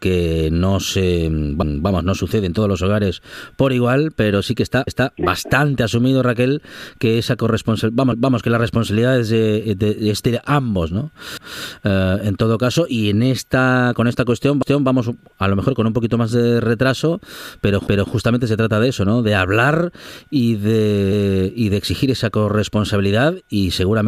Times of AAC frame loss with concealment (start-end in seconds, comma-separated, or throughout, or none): none